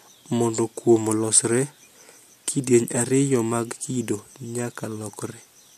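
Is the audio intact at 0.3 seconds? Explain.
Yes, at 0.3 seconds the speech plays through cleanly, with no dropout, click, distortion or other fault to be heard at that moment.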